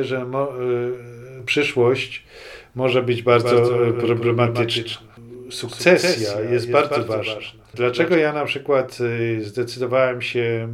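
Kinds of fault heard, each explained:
Doubled audio track: from 3.33 s to 8.15 s a full-band copy trails the original by roughly 150 ms at a somewhat lower level, likely a second capture path or misaligned edit; waveform and spectrogram show every onset repeated at that fixed offset, starting and stopping abruptly.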